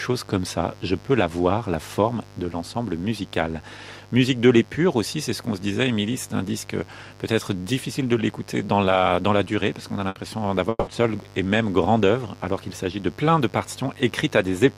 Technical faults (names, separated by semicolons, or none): mains buzz; burst of packet loss; long network dropout